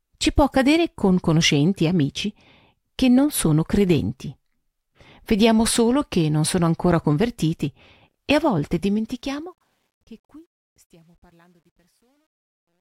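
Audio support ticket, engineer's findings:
Truncation distortion on the fade from 8.66 s to the end, worst from 10.27 s. Tail goes gritty and steppy. Fade stage dropping to what sounds like 11 bits, no dither.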